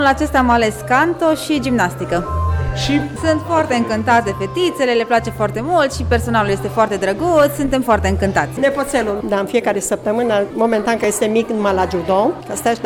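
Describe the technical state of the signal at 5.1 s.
At 5.06 s, an overlap between stream segments (6-second segments) made the player trim real audio from the join, so the waveform jumps, producing a tiny skip.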